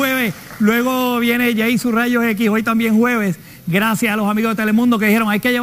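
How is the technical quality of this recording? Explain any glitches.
The recording has one fault, and it runs through the whole clip. It is crude rate conversion. The sample rate was raised by a modest ratio, and the sound points to a 32 kHz to 48 kHz step. New samples were made by simply repeating the nearest old one, with no filter. That repeating pattern cycles at a rate set by the two rates. It adds shifted, inharmonic copies of the sound, about 20 dB below it. You hear a gritty, inharmonic fizz that rides on loud and bright moments.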